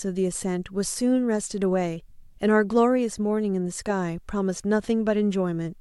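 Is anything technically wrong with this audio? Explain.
No, the speech signal holds together technically, with nothing in the recording or its playback that points to a fault.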